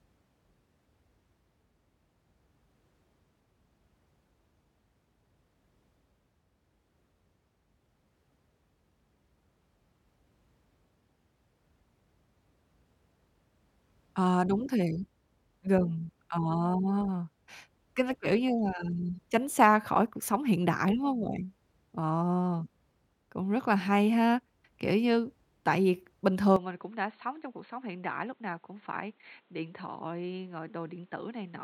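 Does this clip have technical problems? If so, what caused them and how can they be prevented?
Yes. From 26.56 s, just after "như tại vì bình", the speech turns dull and boxy with nothing above 4.3 kHz, drops about 10 dB, and gains new background noise, with no gap at the switch. The likely cause is an input switched to a poorer device. Lock the recording input to one microphone beforehand.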